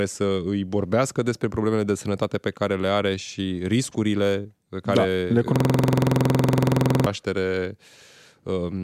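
At 5.56 s the speech stops moving forward and a system hang loop takes over until 7.06 s. The computer or its audio driver froze, but the sound hardware kept replaying the same stretch of its ring buffer. One 46.4 ms slice repeats exactly, 32 times, at 21.5 Hz. That length fits a 2048-sample buffer. At this rate it sounds like a harsh, rapid rattle, halfway between a buzz and a stutter.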